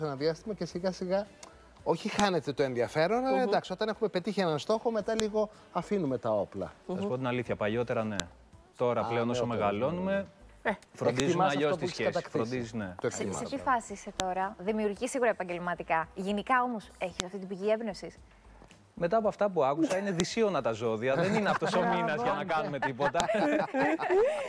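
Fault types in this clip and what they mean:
File header played as audio: separate pieces were joined with their headers left in. Those header bytes play as samples. Each join gives a sharp, loud click, every 3 seconds: 2.20, 5.20, 8.20, 11.20, 14.20, 17.20, 20.20 and 23.20 s.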